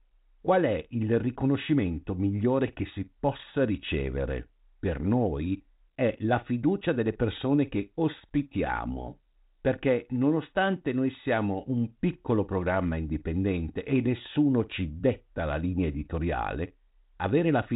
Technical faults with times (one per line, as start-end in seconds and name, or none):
none